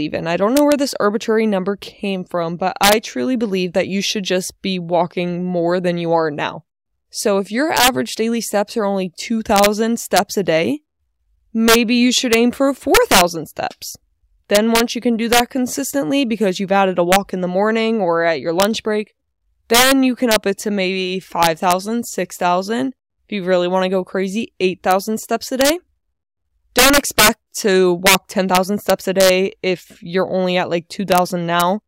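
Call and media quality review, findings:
Integer overflow, throughout the speech. Violent cracks on the loudest peaks. Gain stage driven about 8 dB past full scale; a small fraction of samples wrap to the opposite sign instead of limiting. Probable component: fixed-point gain or mixer lacking saturation. Unlike clipping, which flattens peaks, each wrap flips across the whole range: sharper, louder snaps, not dull distortion.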